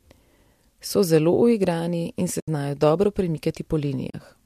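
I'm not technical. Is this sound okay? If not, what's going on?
No. The speech drops out twice. This is AAC frame loss with muting. The first gap runs from about 2.40 to 2.48 seconds, lasting 80 ms. The second runs from about 4.10 to 4.14 seconds, lasting 40 ms. Small pieces of the audio stream went missing, and the player filled them with silence. The sound fades out and back in, so you hear soft holes rather than clicks. These gaps likely came from a low-delay AAC link, the kind used in video calls.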